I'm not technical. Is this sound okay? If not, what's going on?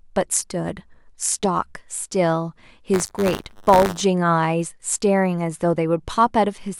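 No. From 2.93 to 4.01 s, buffer tearing: playback fell out of step with the software, splicing in slivers of earlier speech and causing a rattly 100 Hz buzz.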